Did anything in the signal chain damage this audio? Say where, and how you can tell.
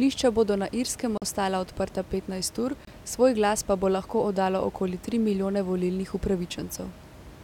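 Yes. Playback cuts to silence twice, for 42 ms at 1.18 s before "ostala odprta petnajst ur" and for 24 ms at 2.85 s before "svoj glas pa bo", then resumes. This is likely a Bluetooth stall: delayed packets emptied the headphone buffer until the resent ones arrived.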